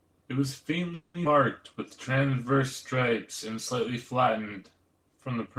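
Call audio freeze from 0.94 to 1.15 s: the last sound is stretched into a fading 200 ms fill, likely from delayed packets draining the jitter buffer, with nothing lost. A skip ahead at 1.24 to 1.26 s drops roughly 150 ms of speech, so the audio jumps forward with an almost direct join. Jitter buffer slow-down from 2.12 to 2.54 s repeats pitch periods, adding 60 ms, so the speech runs at 88% speed with the same pitch and drawn-out sounds.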